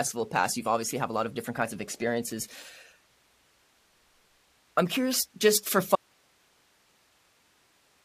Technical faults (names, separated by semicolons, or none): audio dropout to a faint residue